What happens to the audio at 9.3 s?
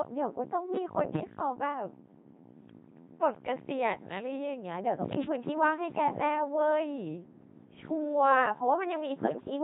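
Bit errors on digital voice radio hit from 9.22 to 9.50 s. Flipped bits reached a very low-rate vocoder, where each bit helps set the pitch, level, voicing or spectral shape of an entire frame, so corrupted frames decode into wrong parameters. Over those 0.28 s the synthetic speech lurches in pitch and loudness, shifts tone colour, and breaks into warbling, bleepy robotic gibberish. The damage fits roughly a dozen frames and an error rate of around 7 percent.

This happens on top of the Codec 2 vocoder heard throughout, with heavy codec damage that fits a 2.4 kbit/s mode. Codec 2 transmits only pitch, voicing, energy and a spectral envelope, discarding the original waveform, and the decoder rebuilds the speech from sine waves. At 9.3 s the speech therefore already has a buzzy, robotic, synthetic quality before the bit errors scramble the parameters further.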